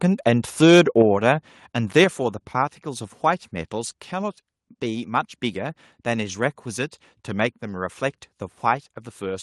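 Right at the start, from 0.62 to 1.02 s, the speech picks up a harsh, crackly edge on its loudest syllables, with peaks pushing about 4 dB past the converter's limit so their tops get sheared flat. It happens again briefly at 1.29 to 1.31 s (about 1 dB over) and at 1.97 to 2.03 s (about 3 dB over). That's microphone overload, likely from the input gain being set too hot for the converter, with only a small slice of samples actually flattened each time.

Straight after that last distorted peak, at 2.04 s, the whole level drops by about 4 dB in a single step, voice and background together. That's the microphone volume stepped down, most likely the call software spotting the clipping and pulling the device's input gain back in one go. Since it lands right on the heels of the overload, the drop reads as a reaction to it, not as anything the talker did. The call codec path on top of this sounds like Opus at around 32 kbps with the top end rolled off near 12 kHz.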